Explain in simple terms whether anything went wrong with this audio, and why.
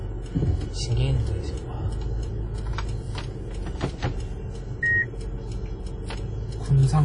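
Something did go wrong, and it runs through the whole clip: the sounds come across ringing and washy, with a hiss that swells and fades with them, and nothing above about 10.1 kHz. That's most likely WMA compression squeezed too hard.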